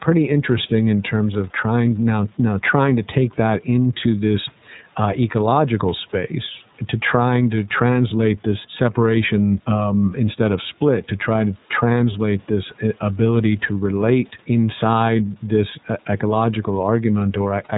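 From start to finish the speech carries plainly audible iLBC codec damage: everything above 4 kHz is gone, and each 30 ms frame is coded on its own, which fits the 13.33 kbps mode. That leaves the voice clear but rough and slightly synthetic. The call's microphone high-pass trims only the deepest bass.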